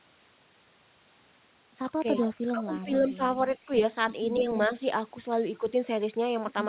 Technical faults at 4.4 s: echo leak; speech suppressed in double talk

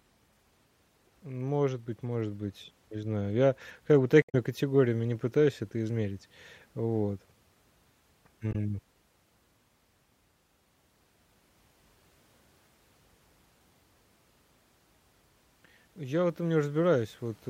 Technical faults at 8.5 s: damaged data in a compressed stream

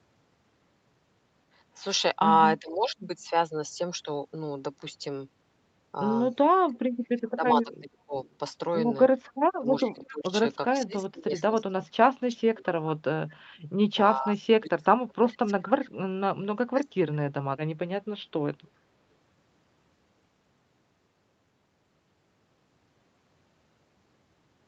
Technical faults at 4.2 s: none

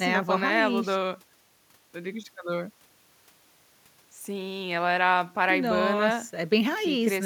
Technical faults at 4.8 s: none

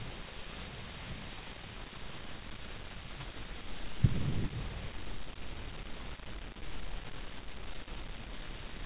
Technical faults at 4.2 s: aliasing

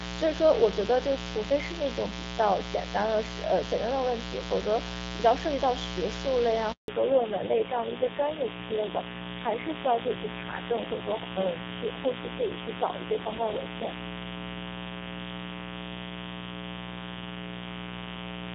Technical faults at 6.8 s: mains buzz; handover gap; fallback to narrowband

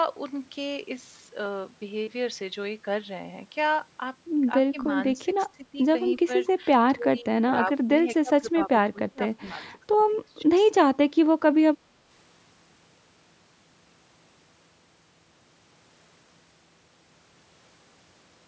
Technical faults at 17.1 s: none

